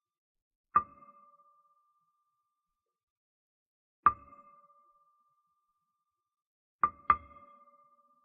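No technical faults can be heard anywhere in this recording of sounds. Nothing in it points to trouble in how the audio was captured, processed or delivered.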